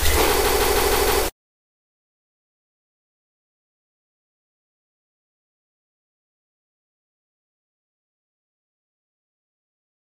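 Repeated frames stutter the audio from 0.43 to 1.22 s: one 157 ms block replays five extra times, adding 0.78 s, unlike echo, which decays.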